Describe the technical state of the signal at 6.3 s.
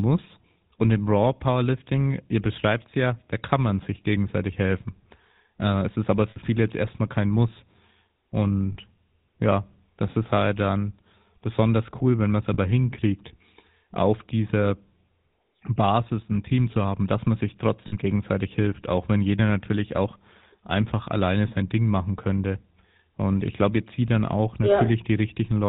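At 6.3 s, right after "es ist aber", lost GSM frames cause a break lasting to 6.38 s, just before "viele jetzt erstmal kein". The decoder repeats the last good frame's settings, about 60 ms, which fits three 20 ms frames. Unlike a clean dropout to silence, the gap is filled with a rough, metallic held ring.

Under this, the GSM full-rate codec at 13 kbps is plainly audible throughout. It rebuilds the voice from a vocal-tract model driven by regularly spaced pulses, cutting everything above 4 kHz. The result is a buzzy, gravelly grain rather than the smeared, warbling haze of a low-bitrate transform codec.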